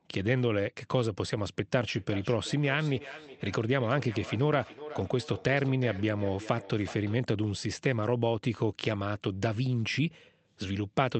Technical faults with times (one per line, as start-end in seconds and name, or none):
1.94-7.30 feedback echo between two devices